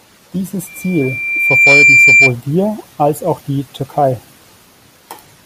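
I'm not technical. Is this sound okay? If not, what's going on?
No. There is loudspeaker feedback squeal from 0.67 to 2.33 s: a shrill tone near 2.4 kHz swells over about a second until it is louder than the speech. The microphone is picking up its own loudspeaker, so that one pitch keeps looping round and growing.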